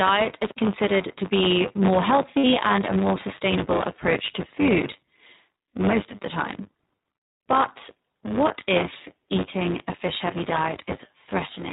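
Speech runs through the whole clip with a steady robotic buzz at 100 Hz, present only while sound is playing. That is buffer tearing: a small slice of each buffer holds audio roughly 20 ms old, with hard joins at both edges. The band is narrow, with nothing above 4 kHz. The speech sounds rough and synthetic, which is plainly audible iLBC codec damage, consistent with its 20 ms frame mode. Between "considered to be more" and "and a more sustainable", from 2.38 to 2.45 s, lost iLBC frames leave a 60 ms gap. The gap is filled by a held, buzzy vowel, which fits three missing 20 ms frames. The speech recovers immediately afterwards.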